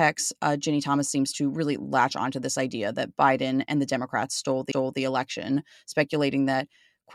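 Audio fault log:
4.72–4.99 s, repeated frames: a 0.28 s block of speech plays once more immediately after itself, a stutter that fits a short run of about three compressed frames being written or sent twice. The decoder replays the duplicate, lengthening the audio by 0.28 s.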